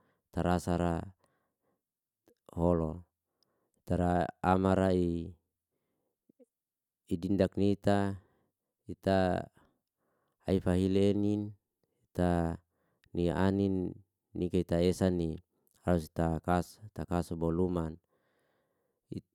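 Nothing in this recording of speech gives any sign of a technical fault, so there's really nothing to flag here.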